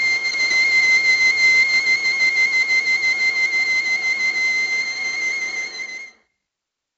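4-bit ADPCM compression runs throughout the music, from start to finish. Each sample is coded as a coarse 4-bit step away from a predicted value, with the step size adapting as the signal moves, and the damage here is heavy: a gritty hiss rides on every loud passage and rises and falls with the level, while sharp attacks smear where the step cannot grow quickly enough. Nothing reaches above 7.8 kHz, which fits a 16 kHz sample rate and leaves the top end dull.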